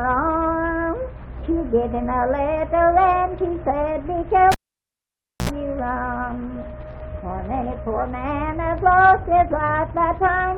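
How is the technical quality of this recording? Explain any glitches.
One glitch stands out. From 4.52 to 5.50 s, a cable is pulled and plugged in. A pop starts roughly 0.93 s of near silence. Then 70 ms of 60 Hz mains buzz sounds as only the tip touches, and a second pop brings the audio back.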